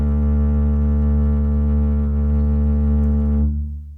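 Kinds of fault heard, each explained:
Nothing stood out on listening to the music; it sounds as it should throughout.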